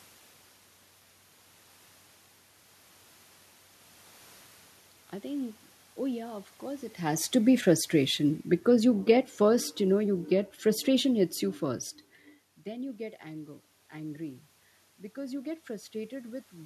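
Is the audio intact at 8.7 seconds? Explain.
No, automatic gain falling runs from 7.39 to 11.35 s: the gain control eases level down about 7 dB, so speech and background sink together, visible as a tapering waveform envelope.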